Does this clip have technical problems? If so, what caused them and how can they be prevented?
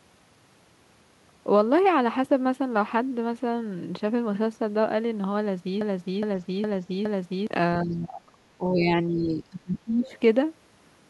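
Yes. From 5.81 to 7.47 s there is a broken-record loop: the player or stream likely stalled and kept resending its last buffered fragment, so a 0.41 s piece of speech repeats back to back four times and the speech meant for that stretch is lost. Better stall handling that inserts silence instead of replaying stale data would prevent it.

Three stretches of speech suppressed in double talk follow, at 7.82 to 8.38 s, 8.58 to 8.86 s and 9.07 to 10.11 s. An echo canceller likely mistook simultaneous talk for loudspeaker echo and attenuated the talker, who drops by about 25 dB, about 5 dB and about 20 dB. A canceller with stronger double-talk detection would prevent this.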